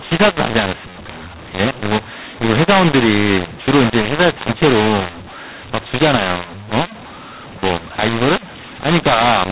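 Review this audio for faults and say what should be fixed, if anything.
The encoder wrote G.711 mu-law but the decoder read it as A-law, a mu-law and A-law mix-up lasting the whole clip. Every byte maps to the wrong level, so the speech turns harsh and distorted, and pauses fill with hiss instead of silence. Fix it by having the decoder take its companding law from the stream's declared format rather than assuming one.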